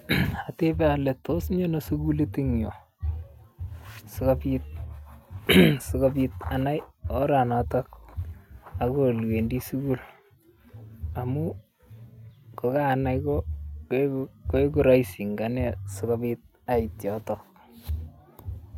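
No technical faults can be heard anywhere in the recording.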